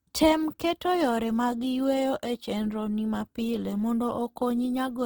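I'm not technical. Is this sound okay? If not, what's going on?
No. All the way through, the speech sounds rough and grainy, as if a fine hiss were woven into it. That is likely Opus compression squeezing the file too hard. Unlike MP3 damage, there's less watery swirling and the brightness stays intact.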